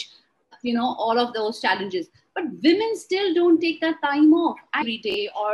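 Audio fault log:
5.10–5.14 s: chunks out of order. Two 20 ms blocks play in swapped order, the later one first and the one that should precede it arriving one chunk late. Nothing is missing, but the three abrupt joins this creates produce a brief jumbled smear of sound.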